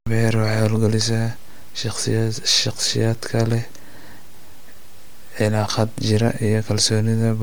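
From start to finish the speech carries a plainly audible breathy, grainy edge, with the upper spectrum sounding smeared and noisy rather than clean, although the band still reaches about 20.2 kHz. This is likely Bluetooth LC3 compression. The transform codec works in short frames, here consistent with 10 ms, and at a rate that fits roughly 48 kbps it discards much high-frequency detail and substitutes filler noise, which produces that texture.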